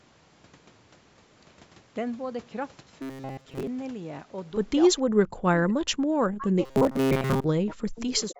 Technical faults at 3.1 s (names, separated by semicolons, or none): robotic sound from repeated short buffers